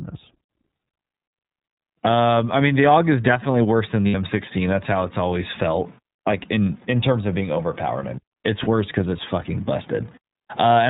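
A speech recording has passed through the iLBC codec, a narrowband VoIP coder whose roughly synthetic, slightly rough texture fits its 13.33 kbps, 30 ms-frame mode. Nothing above 4 kHz survives, so the voice sounds thin and band-limited, with plainly audible coding damage throughout. There are also lost iLBC frames: packets went missing and the decoder filled each hole by repeating the last pitch cycle blended with noise. From 4.08 to 4.15 s this gives about 60 ms of held, faintly buzzy vowel, consistent with two lost frames. At 8.63 to 8.68 s a shorter gap, consistent with a single 30 ms frame, does the same. The voice recovers almost immediately after each.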